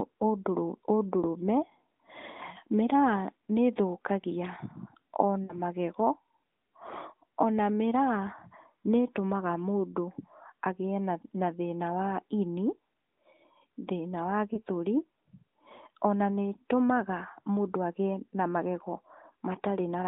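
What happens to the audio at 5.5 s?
Lost AMR speech frames, 5.44 to 5.55 s: the decoder reused the last good pitch and vocal-tract settings with falling gain, giving a brief smeared, fading warble. Two dropped 20 ms frames would fit. On a spectrogram the harmonics freeze flat and dim before the speech resumes.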